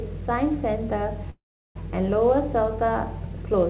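Call audio freeze, 1.3 to 1.77 s: the speech halts into a brief fading buzz, then silence, and resumes intact, likely from a jitter buffer running empty.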